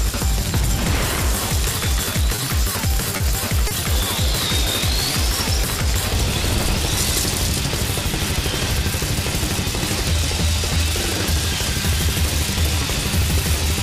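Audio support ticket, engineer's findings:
Short stalls from late packets at 2.35–2.40 s, 3.17–3.22 s and 3.68–3.73 s: sound held about 30 ms, slight buzzy smear. Jitter buffer ran dry, receiver stretched the last sound about 30 ms, then resumed. Nothing lost, but latency grew 30 ms each time.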